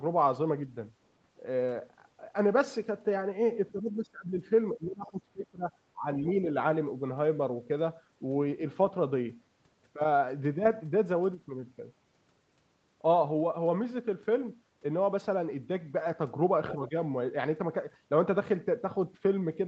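From 3.71 to 4.41 s, 4.72 to 5.72 s and 5.93 to 6.06 s, the speech sinks by up to around 20 dB, and again more mildly, about 10 dB, from 16.76 to 16.95 s. This is speech suppressed in double talk, likely an echo canceller that could not separate the near talker from the far-end echo and turned everything down. At 6.24 to 6.29 s and 16.69 to 16.74 s, the other side's voice leaks through as brief scraps, roughly 20 dB and 15 dB below the speech. These are likely residual loudspeaker echo that the canceller missed. They are a second, faint voice rather than a distortion of the main one.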